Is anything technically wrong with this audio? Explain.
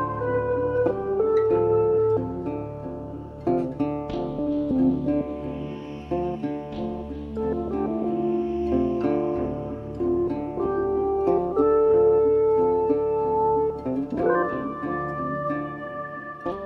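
No, nothing technically wrong can be heard here.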